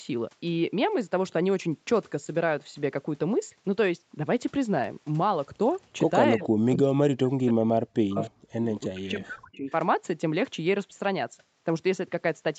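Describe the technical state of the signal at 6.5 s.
Just before 6.5 s, from 6.36 to 6.42 s, the speech dips by around 10 dB. This is likely speech suppressed in double talk. Both ends seem to be talking at once. The echo canceller cannot tell the local talker from loudspeaker echo, so it turns everything down. The dip is brief, roughly 70 ms in all. The voice dips for that moment.

Right after, from 6.42 to 6.48 s, a faint delayed copy of the voice appears. This is likely an echo leak. One side plays the call on a loudspeaker, and its echo canceller misses part of what the microphone picks up. That residue returns 310 ms late, about 15 dB below the speech. It sounds like a short ghost trailing the voice.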